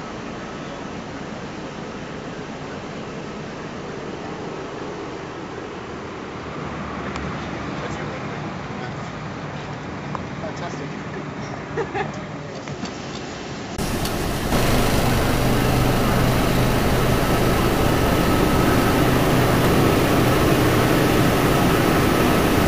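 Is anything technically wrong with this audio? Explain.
Yes. Input switched to a poorer device, 0.0 to 13.78 s: the recording likely began on a narrower-band input, so nothing reaches above 7.6 kHz and the level sits about 5 dB lower. At 13.78 s a 20 ms gap precedes fuller, brighter sound.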